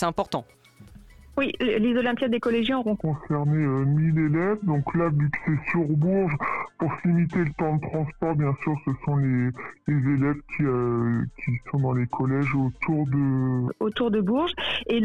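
A section likely played against the wrong clock runs at about 0.69 times its recorded speed from 3.01 to 13.68 s. This is a section at the wrong speed: the audio turns slow and deep, with pitch dropping by roughly seven semitones, then returns to normal.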